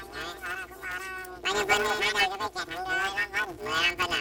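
Throughout, planar audio read as interleaved gives a robotic 188 Hz buzz from 5.33 ms blocks, fitting 256-sample blocks; spectrograms show vertical striations and comb-like sidebands.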